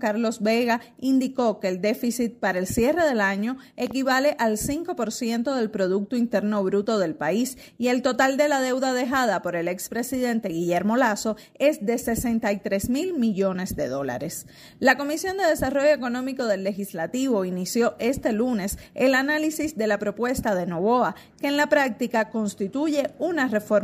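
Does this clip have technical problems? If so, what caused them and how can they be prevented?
Yes. A loud pop, two in quick succession, strikes at 3.87 to 3.93 s, a few decibels above the sound. The likely cause is a voltage pulse from a plug, switch, static or driver glitch. Secure cables and mute outputs before switching equipment.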